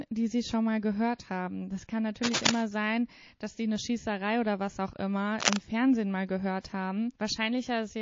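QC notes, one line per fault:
Throughout: MP3 compression. Plainly audible codec damage, likely from a low bitrate around 32 kbps; the treble is cut off and weak detail flickers in and out, giving a watery, swirly texture. A spectrogram shows a hard ceiling on high frequencies and patchy, blinking components below it.
2.23–2.62 s and 5.40–5.61 s: cable scratch noise. Dense, uneven scratching at roughly the level of the speech, the first ending just before "sein dass die eine", the second just after "oder was auch immer", likely from a worn cable or connector being moved. Both appear as ragged broadband bursts on the waveform and spectrogram.
6.61 s: pre-echo. A short hiss about 31 ms long, rising about 12 dB, leads into a sharp attack and softens it. The codec spread its noise across a roughly 72 ms block without switching to short blocks, so the quiet moment before the onset fills with it. 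It shows as a noise smear just ahead of the transient.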